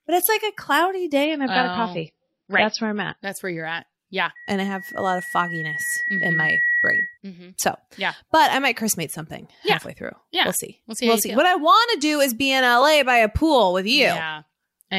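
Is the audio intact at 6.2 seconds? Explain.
No. Loudspeaker feedback squeal runs from 4.35 to 7.18 s: the microphone hears its own loudspeaker, and at 1.9 kHz the loop gain passes one, so a single tone swells over about two seconds into a squeal roughly as loud as the speech.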